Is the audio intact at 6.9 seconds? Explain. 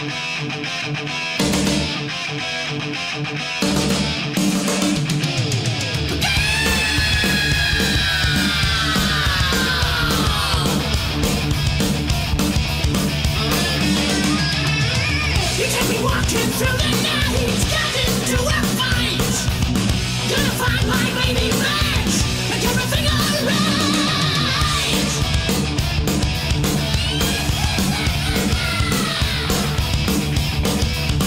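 Yes, the audio is intact at 6.9 seconds, with no fault present at that point.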